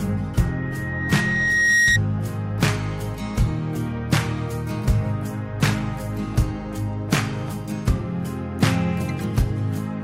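From 0.37 to 1.99 s a loudspeaker feedback squeal takes hold. The microphone re-amplifies its own speaker output until a single 1.9 kHz tone swells over about a second and a half, ending roughly 5 dB above the sound. That steady, self-growing pitch separates it from broadband hiss or clipping.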